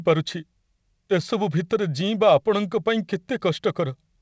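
No technical faults are audible.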